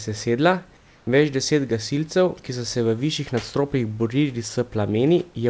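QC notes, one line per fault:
0.77–1.07 s, comfort noise in place of the background: likely discontinuous transmission during the pause, so 0.3 s of real room noise becomes steady, featureless hiss, about 2 dB quieter.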